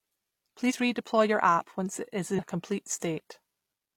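A jump at 0.66 to 0.73 s marks compressed frames skipped: about one 42.7 ms frame was lost, either missing from the file or rejected as damaged by the decoder. At 1.95 s, between "your app" and "it is", a tiny skip is heard, and another at 2.93 s, one second later. These are likely audio missing between chunks, with roughly 10 ms dropped at each 1.0 s chunk boundary and the two sides butted together. After "it is", at 2.34 to 2.39 s, a longer jump skips past around seven frames, roughly 300 ms of sound.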